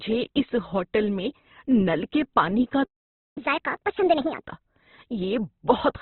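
Opus compression runs through the whole of this speech recording. Nothing is heard above 4.2 kHz, and the narrowband sound is rough and grainy, with noisy, smeared texture where bands have been filled in. This fits the likely cause: heavy encoding in Opus's CELT music mode at a very low rate, around 12 kbps. A playback stall occurs from 2.83 to 3.38 s, just after "نل کے پانی کا". The sound cuts out mid-flow for about 525 ms of silence, probably because the player ran dry of buffered data or its thread was held up, and then resumes where it stopped. Catch-up at higher speed follows from 3.38 to 4.43 s. The player works off its backlog by resampling at 1.5 times normal speed, so the speech runs fast and jumps up roughly seven semitones before settling back to normal rate and pitch.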